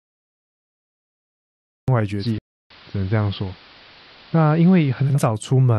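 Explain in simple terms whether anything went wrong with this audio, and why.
Cut-off start at 1.88 s: the first 1.88 seconds are dead silence, and the speech then begins abruptly in the middle of a sound with no natural build-up. The recording or stream began late, so the opening of that sound was never captured.

Digital radio blending to analogue from 2.12 s to 5.19 s: the radio lost its digital signal and cross-faded over about 0.2 seconds to the AM broadcast of the same station. The speech turns dull, and a faint hiss sits well below it. The loudness stays the same.

Playback stall from 2.38 s to 2.71 s: the speech stops dead for about a third of a second, then carries on. This likely happened because the player ran short of data or was briefly held up, leaving nothing to play until it recovered.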